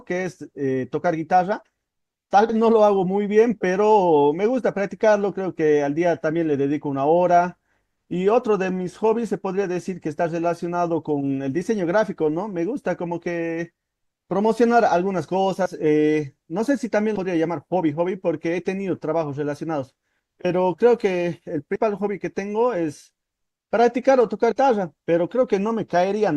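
Whole compressed frames are dropped at 2.49–2.54, 15.65–15.69, 17.15–17.18, 21.75–21.78 and 24.51 s. These are compressed frames skipped: the speech jumps ahead by roughly 70 ms, up to about 150 ms at 21.75 s, which fits several 20 ms frames.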